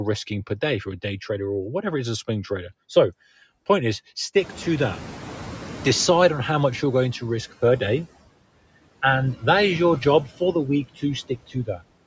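Noise suppressor artifacts run through the whole clip. The suppressor estimates which frequency bands hold steady background noise and pulls them down frame by frame, here by about 16 dB. Between phrases the background sinks away, and under the speech it lifts again because those bands are kept.

Noise suppressor catching up occurs from 4.36 to 7.11 s, starting just after "point is" and ending before "to risk per day". Around 4.5 s the room noise jumps by about 22 dB. The suppressor's noise estimate still reflects the quieter room, so at first it removes only about 9 dB and the louder background comes through with less reduction. Over roughly 2.75 s the estimate catches up, and the noise sinks back down.

Speech cut by the noise suppressor occurs between 11.28 and 11.82 s. In this stretch the suppressor mistakes parts of the speech for background and turns them down with the noise, by about 16 dB at the deepest point. 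Around a fifth of a second of speech is affected in total. The affected parts of the speech sound swallowed or faint.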